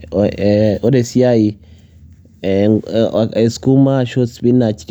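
No technical faults are audible.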